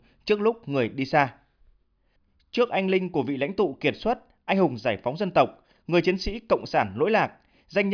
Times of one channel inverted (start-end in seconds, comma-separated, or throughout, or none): none